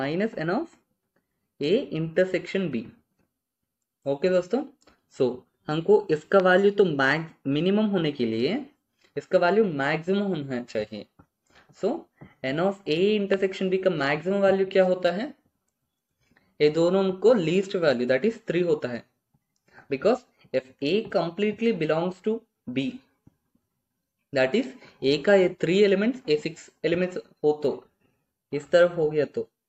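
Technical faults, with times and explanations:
6.40 s and 13.34 s, loud pop: each is a single sharp pop, about 20 ms long, standing well clear of the surrounding audio, roughly 10 dB above it at 6.40 s and 15 dB at 13.34 s, while the sound continues underneath. A sudden voltage step, likely from a switch, plug contact or static discharge, was shaped into a brief pulse. On a waveform each shows as a narrow spike rising well above the surrounding audio; on a spectrogram, a thin vertical stripe spanning the full frequency range.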